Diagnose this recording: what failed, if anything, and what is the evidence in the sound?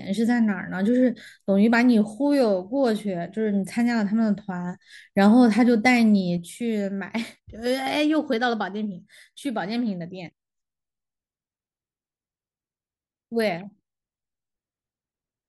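One channel dropping out, likely a failing connection in the analogue wiring, cuts the speech abruptly by about 6 dB at 6.38 s. It stays down to the end because the mono sum now carries only one channel's share of the common signal.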